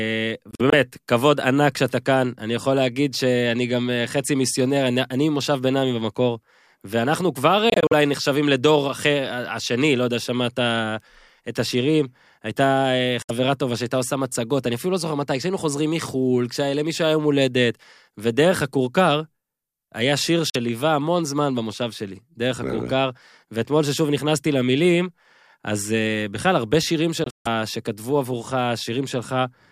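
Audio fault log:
0.51 to 0.74 s, 7.70 to 7.93 s, 13.22 to 13.30 s, 20.50 to 20.55 s, 27.24 to 27.47 s, Bluetooth dropout: the speech cuts to sharp-edged silence and picks up further along, as if it had kept playing, likely because packets arrived late and were discarded. Three gaps are broken stutters across about 0.21 s (about 85, 107 and 171 ms lost), and the last holds one 149 ms hole. The others lose 64 and 43 ms.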